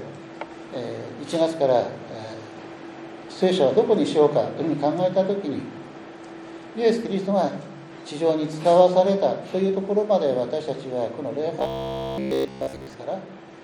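From 11.59 to 12.94 s the audio turns into a rigid, metallic buzz pinned at 66.7 Hz, made entirely of repetition. This is robotic sound from repeated short buffers, likely caused by new audio arriving too seldom, so a 15 ms slice is looped while the real signal is skipped.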